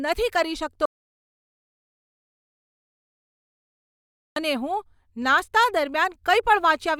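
An audio dropout to silence runs from 0.86 s to 4.36 s, taking out about 3.5 s of the speech. The sound stops abruptly mid-flow and falls to silence, with no room tone or noise floor underneath, then returns just as suddenly. That silent gap most likely comes from the input signal being lost, through a disconnection, a broken link or a stray mute, while recording carried on writing silence.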